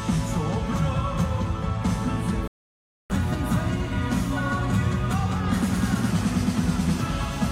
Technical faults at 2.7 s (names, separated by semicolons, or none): playback stall